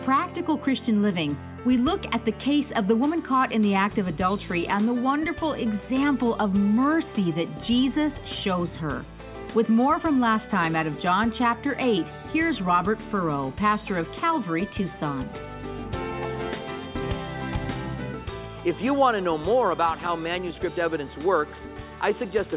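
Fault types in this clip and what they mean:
No fault types are present in this clip.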